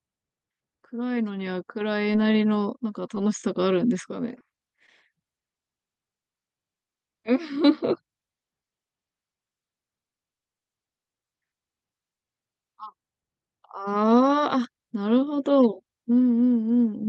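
Short concealed packet loss occurs six times in this speech: at 2.13 s, 3.15 s, 3.42 to 3.44 s, 4.39 to 4.41 s, 4.56 s and 4.87 to 4.89 s. Each time about 10 ms of audio failed to arrive, and the receiver extrapolated from the preceding sound before blending back in, giving a tiny smear or wobble. On a spectrogram each shows as a short, slightly blurred vertical slice. Across the clip, spectral energy stops near 12 kHz, consistent with the Opus call path.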